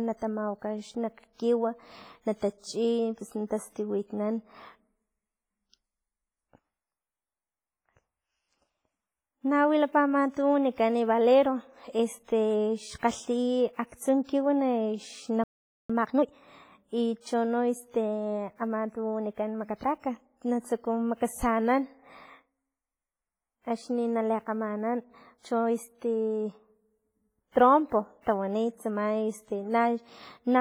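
A speech recording carries heavy transform-codec damage throughout, with a ringing, washy quality and hiss that breathes with the signal, most likely WMA compression at a low bitrate around 24 kbps. At 15.44 s the sound cuts out mid-flow and stays silent until 15.90 s, a gap of about 0.46 s, likely a playback stall. From 15.90 to 16.34 s the audio is then hurried at double speed without any pitch change, the time-compressed catch-up trimming the backlog by cutting and cross-fading small pieces. Pre-echo appears at 27.51 s and 28.21 s, where a short hiss of about 41 ms and 54 ms respectively leads into sharp attacks, softening them because quantisation noise is spread across the whole transform block.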